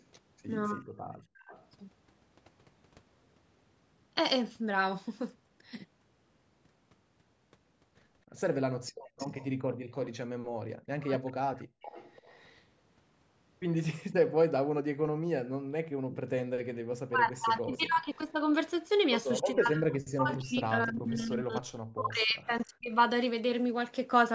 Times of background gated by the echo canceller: 8.91-9.86

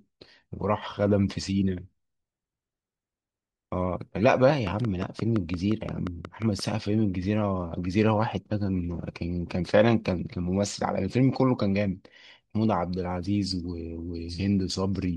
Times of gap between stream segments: none

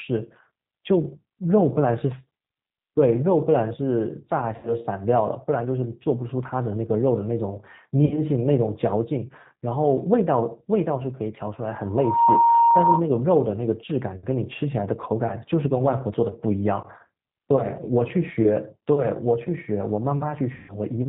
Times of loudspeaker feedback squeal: 11.84-13.09

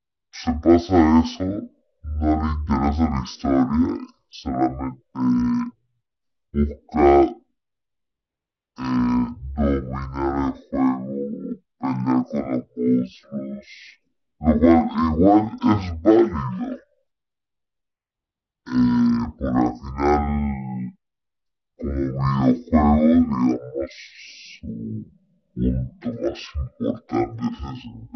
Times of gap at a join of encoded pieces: none

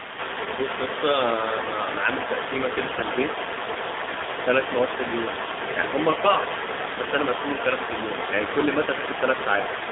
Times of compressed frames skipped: none

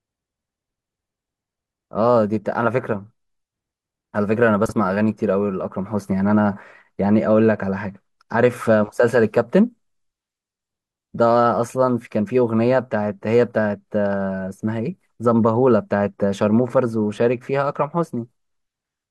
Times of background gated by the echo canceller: none

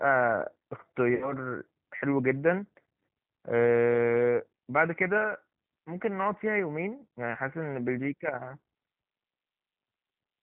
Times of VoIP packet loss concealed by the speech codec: 1.15-1.33

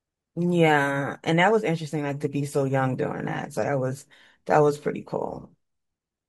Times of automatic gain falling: none

